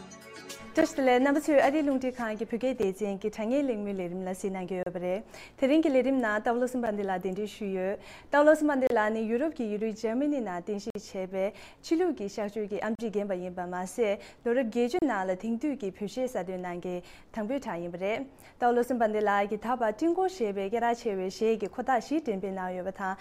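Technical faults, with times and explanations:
0.81, 2.83, 4.83–4.86, 6.86, 8.87–8.90, 10.90–10.95, 12.95–12.99 and 14.99–15.02 s, gap between stream segments: hard-edged dropouts to silence, ranging from about 6 ms to 50 ms, recurring every 2 seconds. That regular spacing suggests the stream is delivered in 2-second segments whose timestamps don't quite meet, so the player fills each seam with silence. Nothing is lost; the silence is inserted between segments, which is why the holes start and stop abruptly.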